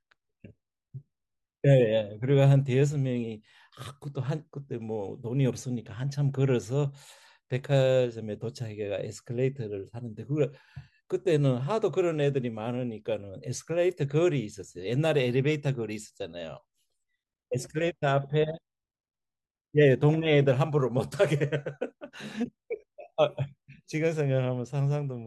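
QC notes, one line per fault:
Nothing to flag on this speech clip; it all sounds as it should.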